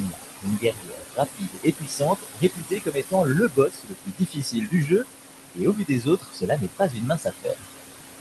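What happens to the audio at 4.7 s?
At 4.7 s the speech is being cut by the noise suppressor. This runs from 2.19 to 5.05 s, with about two seconds of the speech affected in total. The room noise sits about 8 dB below the voice, and the suppressor mistakes the quieter parts of the speech for background and turns them down with it. The deepest drop is about 22 dB. Soft consonants and word endings sound swallowed or faint.

Noise suppressor artifacts are also present here, as they are throughout the clip. Frame by frame, the suppressor lowers the bands it judges to be steady noise, by about 20 dB. The background sinks in the gaps and rises again under the voice.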